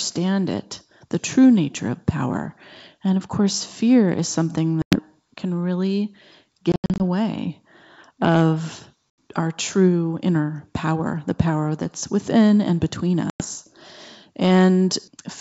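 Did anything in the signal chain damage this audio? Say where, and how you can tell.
Yes. The damage is at the network stage: packet loss on an ADPCM call. Hard-edged dropouts occur at 4.82–4.99 s after "course fear is something", at 6.72–7.02 s after "can really" (180 ms lost in short runs, the longest 80 ms), at 9.11–9.21 s before "our true inner power", and at 13.30–13.45 s. A waveform shows flat, square-edged gaps, and a spectrogram shows blank vertical slots. Afterwards the speech returns slightly distorted while the receiving ADPCM predictor and step size re-converge with the sender's. The G.722 wideband coding itself sounds clean.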